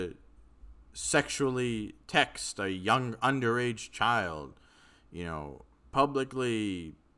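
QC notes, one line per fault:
No faults were heard in this speech clip. Nothing in it calls for a timed entry.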